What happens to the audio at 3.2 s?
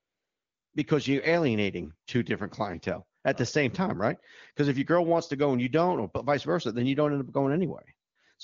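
At about 3.21 to 3.23 s there's a brief burst of AMR comfort noise. For roughly one 20 ms frame the phone decided nobody was talking and stopped sending speech, so the receiver filled that gap with smooth synthetic noise in place of the real background.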